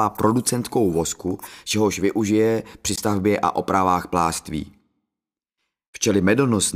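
At 2.96–2.99 s and 5.90–5.96 s, brief silences end with the sound resuming further on, not where it stopped: a likely Bluetooth dropout.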